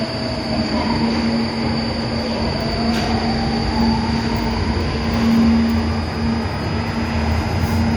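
From start to finish, a switching supply whistle sits under the sounds: a thin, high tone near 5 kHz, roughly 20 dB below the main audio. Its pitch wanders slightly, between about 4.91 and 5.0 kHz. A nearby switching power supply running in an audible burst mode or beating with another one is leaking into the signal. On a spectrogram it shows as a narrow, slightly wavering horizontal line across the whole clip.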